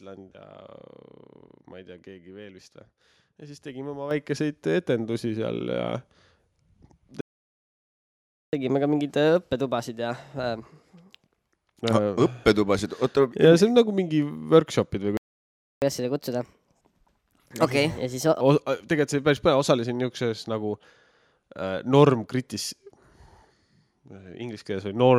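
At 4.11 s the speech and background jump together by about 7 dB, a microphone volume stepped up as the call software raised the input gain. From 7.21 to 8.53 s the sound cuts out for 1.32 s, then again from 15.17 to 15.82 s for 0.65 s. Each is a playback stall, likely the player running dry or being blocked. After each stall the speech runs fast and high, at 1.15x and about two semitones up until 11.53 s, then at 1.25x and about four semitones up until 18.41 s. This is catch-up at higher speed, with the player resampling to work through its backlog.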